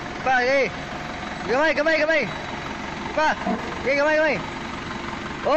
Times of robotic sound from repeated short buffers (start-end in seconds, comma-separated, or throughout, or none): none